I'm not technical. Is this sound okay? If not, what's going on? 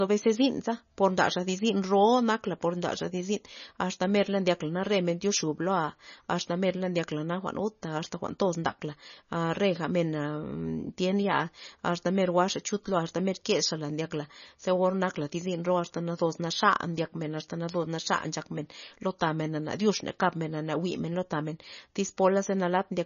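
No. The whole clip sounds dull above about 6.9 kHz and has a watery, swirling quality, with smeared s sounds and consonant onsets. This is likely heavy MP3 compression, which discards treble and quieter detail to make the file smaller.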